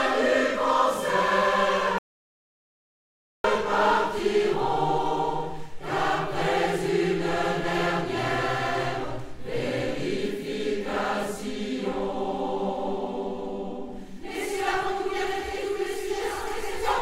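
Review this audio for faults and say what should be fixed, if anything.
At 1.98 s the sound cuts off abruptly and the track goes to silence until 3.44 s, when it resumes mid-flow. This is an audio dropout to silence lasting about 1.46 s. There is no room tone or noise floor in the gap, so whatever occurred during that stretch is unrecoverable. The likely cause is a momentary loss of the input signal, such as a loose connector, a dropped link or an accidental mute, while the recorder kept writing samples. To prevent it, secure and monitor the input chain during capture and run a backup recording so a lost section can be patched in.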